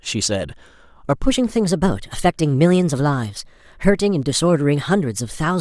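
From 1.24 s to the end at 5.61 s, the speech turns abruptly higher and more hurried, running 1.14 times fast and roughly two semitones sharp. This section at the wrong speed was likely played against the wrong clock, shifting pitch and tempo together.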